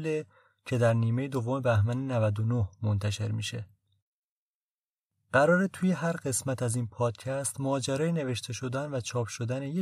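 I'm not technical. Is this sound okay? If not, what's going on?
Yes, this speech recording sounds fine, with nothing going wrong anywhere in it.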